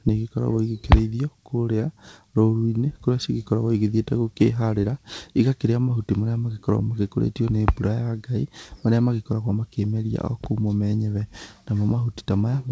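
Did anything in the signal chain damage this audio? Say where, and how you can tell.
No, nothing stood out on listening; the speech carries the wideband character of a call path using G.722 at 64 kbps, with nothing above 8 kHz, which is simply how that codec passes audio.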